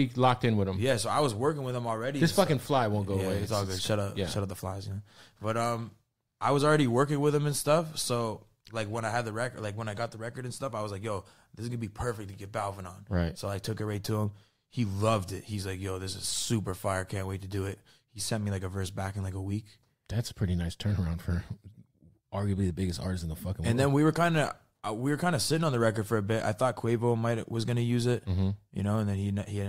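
Speech recording, no technical faults found.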